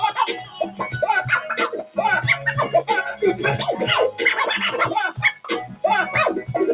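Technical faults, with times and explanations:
Throughout: noise suppressor applied to music or sounds. A suppressor tuned for speech stays active on material it was never meant for, treating sustained tones, ambience and decaying tails as background noise and pulling them down while sharp onsets slip past. The gain rides up and down by about 10 dB, so the sound pumps and thins, held parts sagging between attacks. All of this sits inside a narrowband call path with nothing above 4 kHz.
0.43–0.81 s, 1.83–1.98 s, 5.33–5.48 s and 5.66–5.84 s: sound cut by the noise suppressor. At each of these moments the suppressor misjudges the material as noise and clamps it harder than its surroundings, by about 11, 14, 12 and 15 dB at the deepest points. The longest dip lasts roughly 0.4 s, the others 0.15 to 0.2 s. Steady or fading content sinks in level, and tails are cut short where they should ring on.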